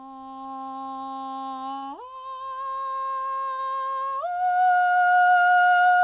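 At 1.78 to 1.84 s and again at 3.54 to 3.60 s, short concealed packet loss occurs. About 40 ms of music went missing each time. The receiver extended the preceding sound to fill it, heard as a brief smear or wobble. The music is band-limited to 4 kHz throughout, consistent with a G.711 A-law call path.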